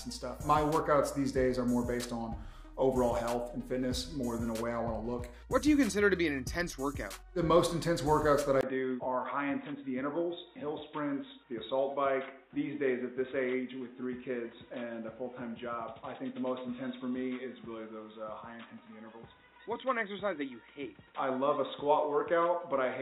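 At 8.61 s the input likely switched to a poorer device. After a 20 ms gap, nothing above 3.8 kHz remains, so the sound turns dull and boxy. It is also a few decibels quieter, with faint new background noise to the end.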